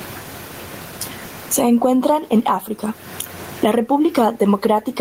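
A speech recording running through an input gain set far too hot for the microphone, likely with a fast limiter or compressor clamping down on every loud syllable, shows gain pumping from start to finish. The level rides up and down by roughly 25 dB, with the room noise sitting about 41 dB under the speech, leaving the delivery flattened and squashed.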